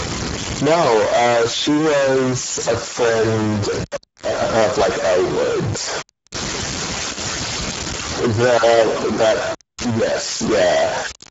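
Distortion rides on the speech for its whole length, and the pauses fill with hiss. The likely cause is a stuck bit, one data bit held at a fixed value. Throughout, the speech also sounds hoarse and noisy, with nothing above 7.7 kHz: plainly audible Speex codec damage at a rate that fits roughly 10 kbps, too few bits for the excitation.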